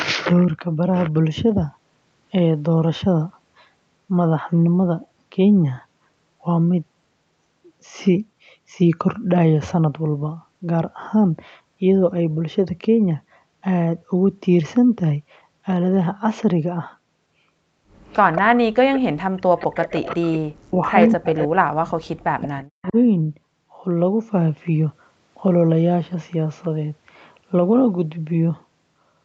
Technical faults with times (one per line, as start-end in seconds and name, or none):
18.06-18.41 echo leak
18.45-19.51 speech suppressed in double talk
18.94-18.99 echo leak
19.58-22.93 echo leak
20.15-21.82 speech suppressed in double talk
22.39-22.97 speech suppressed in double talk